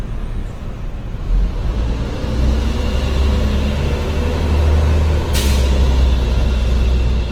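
Opus compression, throughout the whole clip, is the likely cause of the plainly audible damage. The full band is kept, reaching about 20.1 kHz, but starved bands are refilled with folded or noise-like content, so tones turn rough and grainy. That points to music-mode encoding near 16 kbps.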